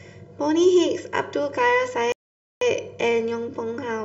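From start to finish the speech carries channel delay (comb filtering): one channel trails the other by roughly 2 ms, and summed to mono they cancel at evenly spaced frequencies beginning near 300 Hz. The result is a hollow, phasey tone with notches that stay fixed, unlike a flanger's sweeping ones.

At 2.12 s a playback stall cuts the sound to silence until 2.61 s, about 0.49 s. The likely cause is the player running dry of data or its thread being blocked.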